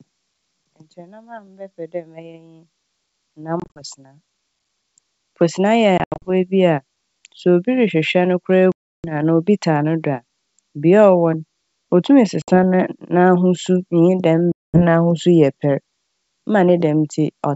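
Packet loss on an ADPCM call cuts five hard-edged silent holes into the G.722 speech: 3.60–3.82 s (100 ms lost in gaps up to 40 ms), 5.98–6.31 s (160 ms, runs up to 80 ms, just before "bi a"), 8.72–9.05 s (320 ms) and 12.42–12.51 s (60 ms) and 14.52–14.82 s (220 ms). Each restart comes back slightly distorted, at times with a click or at the wrong level. The decoder's predictor and step size have drifted from the sender's and take some tens of milliseconds to fall back into step.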